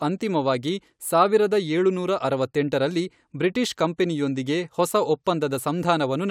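Nothing stood out on listening to this speech recording.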